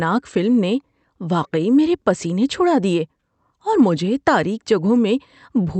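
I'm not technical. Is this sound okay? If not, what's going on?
Yes, it's fine: this speech came over an ordinary internet call, so the very highest sounds above about 8 kHz are trimmed off the way calls normally do, but nothing has gone wrong with it.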